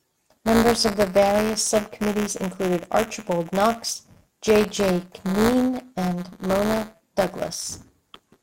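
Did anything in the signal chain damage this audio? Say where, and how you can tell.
Yes. Buffer tearing runs throughout the speech, at the driver or buffer stage. A steady robotic buzz at 172 Hz sits on the sound and appears only while there is signal, which fits a 256-sample buffer. The writer and the hardware reader of the ring buffer have drifted so their positions cross inside every period. A small slice of each buffer, around 5 percent, replays audio roughly 10 ms old, with hard joins on both sides.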